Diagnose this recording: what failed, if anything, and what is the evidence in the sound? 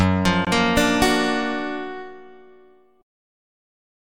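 The failure is at the codec stage, where separately encoded pieces were joined. There is a gap at a join of encoded pieces from 0.45 to 0.47 s. The continuous sound drops out for about 20 ms. The edges are smeared, so the fully silent part is shorter than that. Then the sound resumes exactly where it stopped, with nothing missing. That points to a join left untrimmed. The encoder's start-up delay and its final-frame padding both stayed in the file, and together they open the silent hole.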